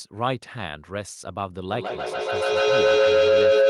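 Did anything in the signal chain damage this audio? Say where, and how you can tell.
Yes. From 1.7 s to the end at 3.69 s a feedback howl builds in the call path: an acoustic loop, with a second device in the same room playing the call back into the microphone with more gain than the loop loses. Each pass reinforces a tone near 500 Hz, repeating roughly every 150 ms and peaking about 11 dB above the speech. On a spectrogram it appears as one bright horizontal line that brightens over time. On the waveform the envelope swells.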